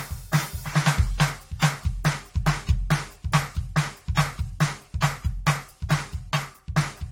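From start to finish the music carries generation loss, likely from about three successive AAC-LC encodes at bitrates that sound near 64 to 75 kbit/s. Each pass requantises on a shifted frame grid, so the swirly, hollow smearing accumulates, attacks blur, and nothing survives above 16.6 kHz.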